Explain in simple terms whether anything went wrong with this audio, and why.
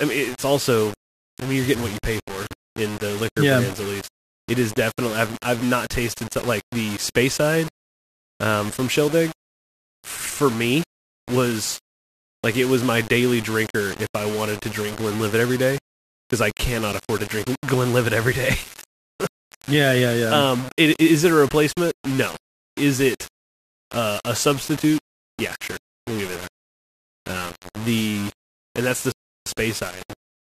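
Two things went wrong. Throughout the clip, the speech carries a gritty, grainy distortion that follows the voice and sits not far below it in level. This is the sound of low bit depth without dither. The audio was most likely stored with very few steps of loudness, about 5 bits' worth, and each sample was rounded to the nearest step. Because the rounding error tracks the speech itself, quiet parts turn rough instead of staying smooth.

Near the end, just after "the and that's the", the audio cuts to silence at 29.12 s and picks up again at 29.46 s. This is a rebuffering stall. The player ran out of downloaded audio, paused until more arrived, then continued from exactly where it had stopped. No speech is lost, but about 0.34 s of dead air is inserted into the middle of the phrase.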